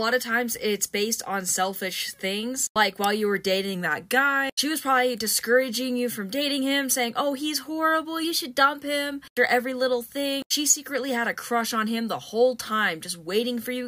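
Drift correction steps at 3.75–4.60 s and 8.25–8.79 s: the sound slows about 5.7% and drops roughly a semitone, then snaps back; later it speeds up 5.7% and rises about a semitone. Likely a clock-matching resampler stepping playback rate to rebalance its buffer.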